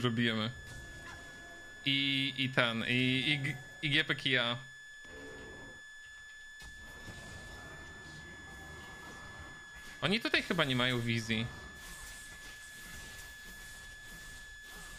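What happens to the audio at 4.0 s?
At 4.0 s, as throughout the clip, a switching supply whistle sits under the audio: a thin, high tone drifting between about 1.71 and 1.74 kHz, roughly 15 dB below the signal, from a switching power supply running in an audible burst mode or beating with another one. A spectrogram shows it as a slightly wavering horizontal line.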